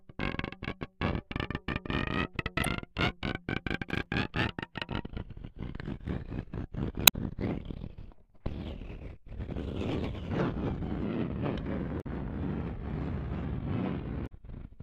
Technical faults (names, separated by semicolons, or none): damaged data in a compressed stream; processor overload crackle